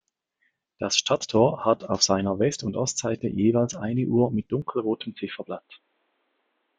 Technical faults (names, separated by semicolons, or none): input switched to a poorer device